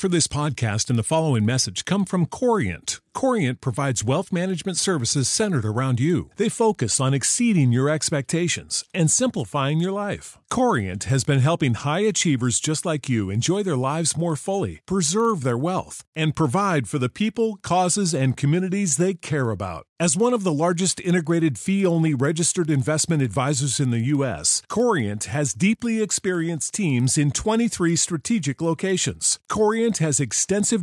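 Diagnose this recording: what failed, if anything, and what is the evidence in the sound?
The resampler is restarting on every block, and the fault sits in the sample-rate conversion stage. All through the speech there's a steady tick at 20 Hz, a fine buzzy roughness that rides on the voice and drops out in the pauses. That rate matches 50 ms blocks, each converted in isolation (it points to a 48 kHz to 24 kHz step). Each block's edges get filtered against the wrong neighbours, so every seam leaves a small error.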